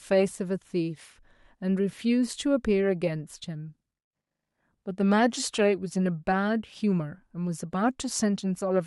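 No technical faults can be heard anywhere in the recording, and the signal stays continuous and steady throughout.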